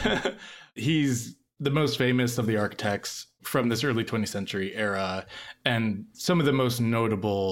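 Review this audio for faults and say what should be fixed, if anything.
Nothing in this speech recording needs fixing. No faults turn up anywhere in it, so no corrective step is called for.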